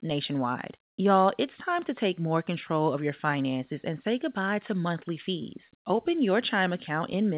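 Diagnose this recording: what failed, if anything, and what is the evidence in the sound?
Nothing in the recording points to a failure at any stage. The speech has come over a working call path, with nothing above 4 kHz, which fits a narrowband telephone codec such as G.711 mu-law at 64 kbps.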